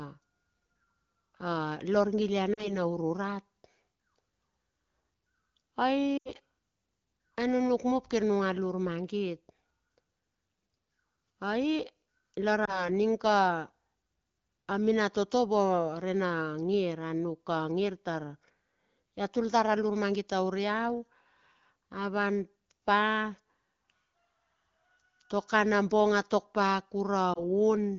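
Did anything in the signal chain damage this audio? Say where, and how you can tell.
Yes. The damage is in the network, as lost AMR speech frames. The speech briefly dips or drops out at 2.53 to 2.75 s, 6.17 to 6.30 s, 12.65 to 12.89 s and 27.33 to 27.42 s, then returns weak or rough for a moment. The longest gap, at 6.17 s, drops to near silence within two frames, which fits about 80 ms of missing audio. The wideband decoder filled each gap by repeating the last good pitch and vocal tract settings at falling gain. The surrounding HD Voice audio is clear at 12.65 kbit/s.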